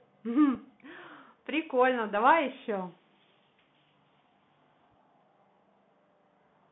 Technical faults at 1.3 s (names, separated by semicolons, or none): Bluetooth CVSD headset codec